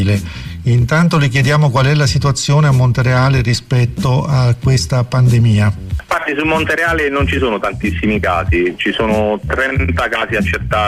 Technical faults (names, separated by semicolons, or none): none